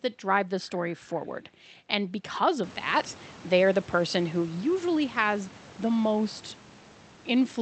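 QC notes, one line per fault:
No fault found, so there is nothing to log in these QC notes.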